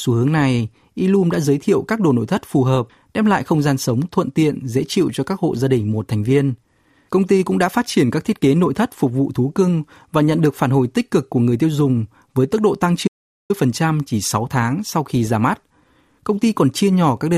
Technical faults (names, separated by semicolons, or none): audio dropout to silence